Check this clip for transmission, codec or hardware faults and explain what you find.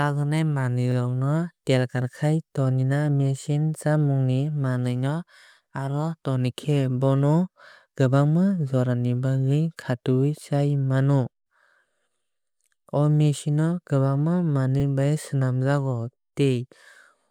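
Two brief stutters in the speech, at 0.92 s and 14.80 s, are a repeated buffer: the new audio arrived late, so the player replayed the previous 40 ms block once, with a hard join. Unlike a dropout, no audio goes missing. The same fragment is simply heard twice in quick succession.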